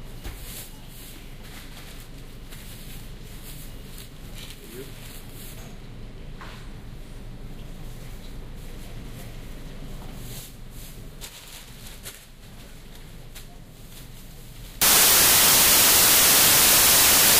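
At 14.82 s the audio turns into broadband noise and stays that way until the end at 17.40 s. This is samples built from the wrong bytes. The reader joined each sample's bytes wrongly. The fast-changing low bits now dominate every value.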